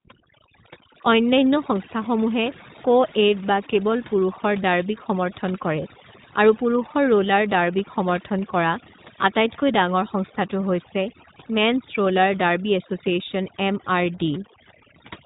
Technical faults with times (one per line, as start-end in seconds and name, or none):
0.00-15.25 overdone noise removal
0.00-15.25 iLBC codec